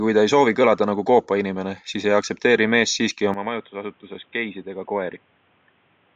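At 3.34 s the speech abruptly turns dull and boxy, with no gap, as the input likely switched to a poorer device. Level drops around 10 dB, a faint new noise floor appears, and the spectrogram shows everything above 3.8 kHz vanishing; the waveform shrinks.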